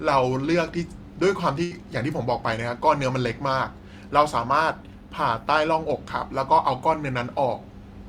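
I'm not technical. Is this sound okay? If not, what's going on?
No. A burst of packet loss hits at about 1.63 to 1.73 s. A run of audio data never arrived, so the player stretched the last bit of speech for about 75 ms while fading it, then jumped ahead, leaving about 80 ms missing.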